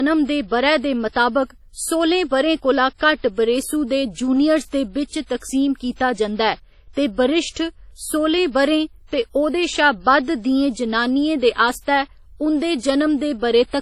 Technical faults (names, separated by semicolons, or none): low-bitrate audio saved at a high bitrate